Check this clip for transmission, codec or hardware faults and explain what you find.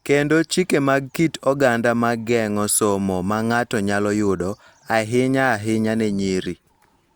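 Nothing in this speech clip points to a fault. There is nothing in what can be heard that needs explaining.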